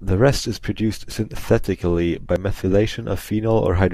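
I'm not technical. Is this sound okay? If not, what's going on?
No. At 1.12 s and 2.36 s the speech jumps ahead slightly, losing a sliver of sound each time. The likely cause is a dropped buffer (overrun): the recording software fell behind, and a small chunk of audio was overwritten and skipped.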